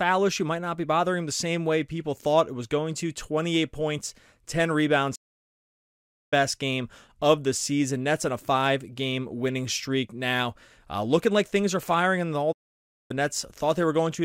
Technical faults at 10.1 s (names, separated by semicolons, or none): none